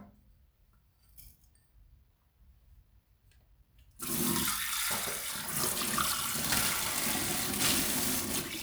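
A recording of sounds that turns rough and hissy from 6.35 s to the end at 8.62 s, with the grit swelling on loud, bright moments. This is sample clock jitter: a timing wobble of around 10 microseconds puts the error only a few decibels below the sound itself.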